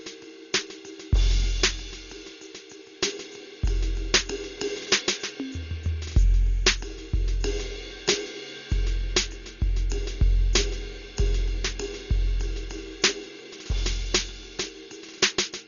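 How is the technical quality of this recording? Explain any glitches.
The technical quality is poor throughout. The music sounds dull and muffled, with nothing above about 6.9 kHz, and a rough, fluttering noise clings to sustained tones. The likely cause is heavy Dolby Digital compression at a very low bitrate, around 40 kbps, where the encoder narrows the band and leaves many frequency lines without detail. The decoder fills those gaps with dither noise.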